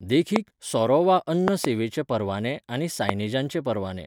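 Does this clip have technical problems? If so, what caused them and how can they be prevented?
Yes. There are loud pops: sharp clicks standing about 20 dB above the speech, which carries on underneath, at 0.36 to 0.38 s, at 1.48 to 1.67 s as a quick double pop just before "परवाने आनी", and at 3.09 to 3.11 s just after "परवाने आनी". The likely cause is a sudden voltage step or pulse from a plug, a switch, static or a driver glitch, briefly shaped by the circuitry after it. Seating connectors firmly, avoiding switching or handling cables while recording, and keeping drivers stable should prevent them.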